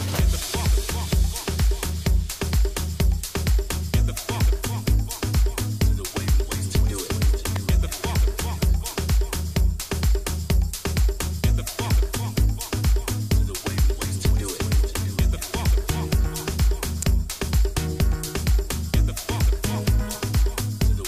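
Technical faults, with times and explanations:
7.56 s and 17.02 s, electrical switching spike: two brief, fairly loud snaps sit on top of the sound. A nearby switch or motor arcing likely caused them.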